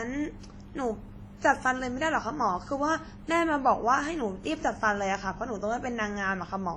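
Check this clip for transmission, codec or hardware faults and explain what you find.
The speech has been through more than one lossy codec, most likely transcoding between lossy codecs, with an earlier low-rate stage (the texture fits something like WMA around 32 kbit/s) re-encoded by HE-AAC. Throughout the clip, the second encoder spends its bits reproducing the first one's artefacts and adds its own, so two kinds of coding smear sit on top of each other. Nothing is present above about 18.1 kHz.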